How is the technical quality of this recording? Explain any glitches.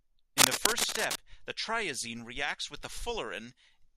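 The recording has one clear fault: cable scratch noise from 0.38 to 1.17 s. It sits roughly as loud as the speech, a little above it. Dense, uneven bursts of rustling scratch over the voice there. The likely cause is a worn cable or connector being moved, so that its contact resistance changes rapidly. On a spectrogram it appears as broadband vertical streaks. The waveform shows jagged, irregular spikes.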